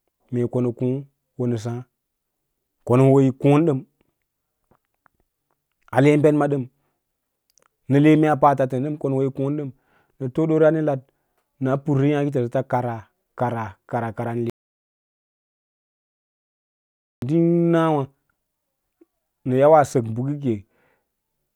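Right after "kara kara kara nə" at 14.5 s the speech drops out to dead silence until 17.22 s, an audio dropout likely from lost input, with no room tone left.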